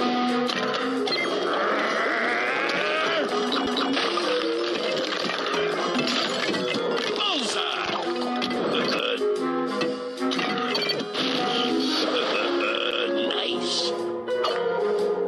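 CD skips occur at 3.66, 8.99 and 12.91 s. Each is a tick with a mute of a few milliseconds, after which the audio resumes from another point, as a knock or disc flaw throws the laser onto a different turn of the spiral track.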